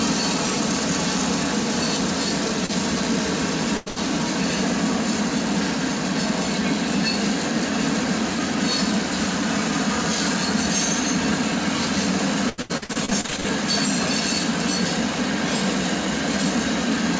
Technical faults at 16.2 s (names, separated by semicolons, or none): none